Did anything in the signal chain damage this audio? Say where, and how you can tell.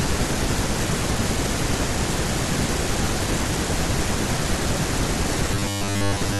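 Yes. From 5.54 to 6.39 s the speech turns into robotic sound from repeated short buffers, a rigid 100 Hz buzz. The likely cause is buffer underrun, with roughly 10 ms blocks replayed for most of that stretch. Unlike silent dropouts, the gaps are filled with pitched repeats.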